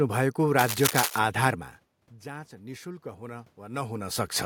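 From 0.58 to 1.19 s, a worn cable or connector likely shifted, its contact resistance flickering. The resulting cable scratch noise is a dense, uneven rasp nearly as loud as the speech. From 2.22 to 4.39 s, with the input about 17 dB quieter, the automatic gain rising adds roughly 6 dB, so speech and room noise swell together.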